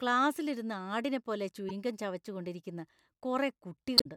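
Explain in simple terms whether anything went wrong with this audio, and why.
Damaged data in a compressed stream caused two brief glitches in this speech. Part of the compressed file was corrupted, so the decoder lost its place and hunted for the next clean frame. That shows up as a short glitch: once from 1.69 to 1.71 seconds, between "ക്ലാസിലിരുന്ന് ആടിനെപ്പോലെ" and "ഗം ചവച്ചുകൊണ്ടിരിക്കുന്ന", and again, about five times longer, from 3.95 to 4.06 seconds near the end.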